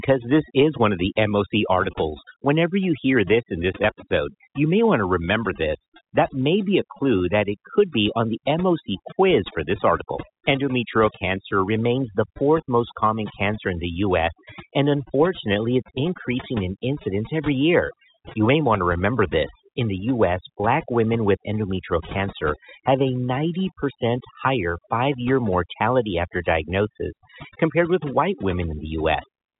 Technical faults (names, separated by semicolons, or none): overdone noise removal